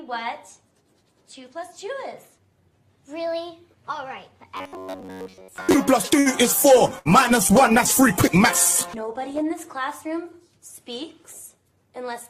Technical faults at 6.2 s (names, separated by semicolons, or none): short stall from a late packet